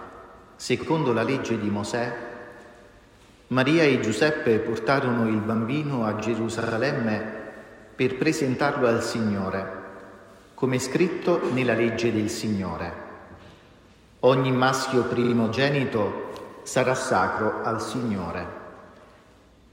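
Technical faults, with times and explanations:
0.82–0.88 s, repeated frames: a short stutter, as a 70 ms block plays twice.
6.60–6.74 s, repeated frames: a rapid triple stutter, as a 46 ms block plays three extra times and adds about 0.14 s.
11.22–11.24 s, repeated frames: a single tiny hiccup, as one frame of about 23 ms is sent again.
15.23–15.33 s, repeated frames: a double stutter, as a 46 ms block repeats twice.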